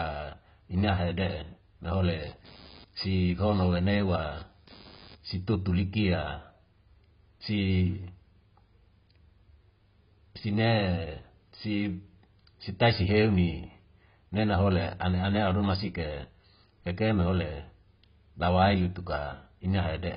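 Heavy AAC compression runs throughout: the speech is dull, with nothing above 5 kHz and a warbling smear, likely from AAC-LC at a very low bitrate, about 16 kbps. Computer activity noise appears from 2.21 to 5.41 s, just after "ina hede na hole": a buzz pulsing around 100 Hz, about 25 dB below the speech, as computer activity disturbs the audio ground.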